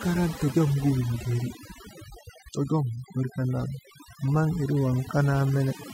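Timecode bleed runs through the whole of this speech recording: a steady chirping warble sits behind the talker, roughly 35 dB down, switching between tones near 1 kHz and 2 kHz. That alternation is the signature of linear timecode, a square-wave signal whose pitch flips with the bit pattern, leaking from an adjacent track or cable into the audio path. Its 30-frames-per-second rhythm gives the chirp its regular, ticking texture. Overdone noise removal also affects the entire clip. A noise reduction process set too aggressively is pulling individual frequency bands sharply down or muting them whenever they fall close to its noise estimate. Between phrases the background collapses to near silence scattered with twinkling specks where isolated bands briefly survive. The quieter components of the speech are caught by the same gating.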